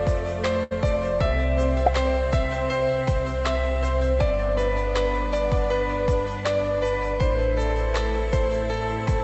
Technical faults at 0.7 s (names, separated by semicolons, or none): burst of packet loss